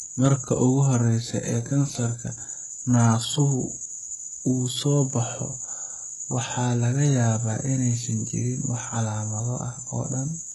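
Throughout, the treble is gritty and lispy, with nothing above 11.5 kHz. This likely comes from heavy HE-AAC compression at a very low bitrate, rebuilding treble from copied lower bands.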